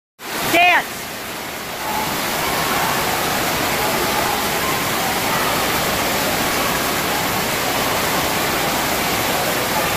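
From 0.09 s to 9.92 s, periodic USB or driver dropouts recur every 0.06 s, roughly 150 in all. Something keeps stalling the audio path, and each time a few milliseconds are skipped outright. The joins give a steady, rapid ticking wherever sound is present.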